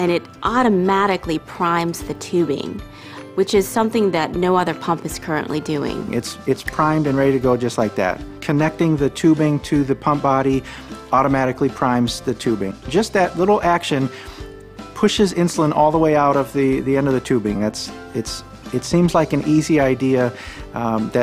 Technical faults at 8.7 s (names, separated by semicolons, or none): none